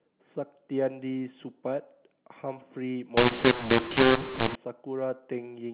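Speech heard through the narrow telephone band of G.711 coding, with nothing above 4 kHz, turns harsh and gritty from 3.17 to 4.55 s: levels jump unevenly, some louder and some smaller than they should be, and the gaps between sounds fill with a raised hiss instead of falling quiet. This is mu-law and A-law mixed up. Samples coded with the mu-law curve are being expanded with the A-law curve, so every 8-bit code maps to the wrong amplitude and the quietest values are pushed well above silence.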